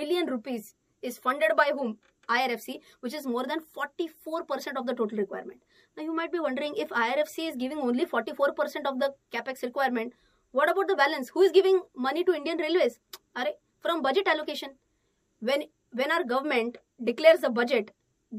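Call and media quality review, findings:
Call and media quality review found no faults in this clip.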